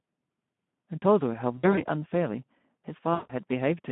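Throughout the clip, the speech passes through the Speex codec at around 11 kbps, confined to a telephone-like band of roughly 150 Hz to 3.5 kHz. The codec damage is plainly audible. With so few bits for the excitation signal, the voice sounds hoarse and grainy. There is no content above 3.5 kHz, so the sound is muffled and boxy.

From 1.57 to 1.86 s there is VoIP packet loss concealed by the speech codec. About 100 ms of audio is missing, scattered over 200 ms, with the longest gap near 60 ms. The decoder fills each gap by repeating its last pitch and filter at falling gain. The result is a brief smear, buzzy or noise-like, that fades. A second loss runs from 3.14 to 3.33 s, where about 160 ms drops out. This gap is longer, so the concealed sound is stretched further as it fades. The speech returns weak and distorted for a moment afterwards, because each decoded frame builds on the damaged one before it.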